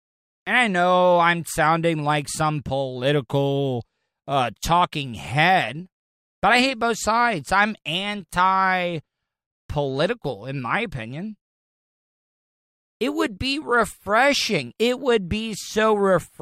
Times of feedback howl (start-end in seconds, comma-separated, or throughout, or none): none